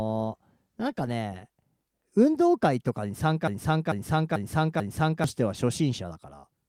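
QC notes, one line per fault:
3.48–5.24 s, broken-record loop: the speech abruptly stops moving forward and a single 0.44 s fragment plays four times back to back, identical each time, before normal speech resumes. Whatever should have been said during those 1.8 seconds never arrives. This is likely a stall in the player or stream, which kept re-sending the last buffered piece of audio until fresh data caught up.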